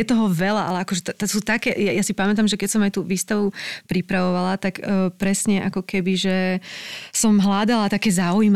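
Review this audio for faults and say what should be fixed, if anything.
No faults were found in the audio, so nothing should be fixed.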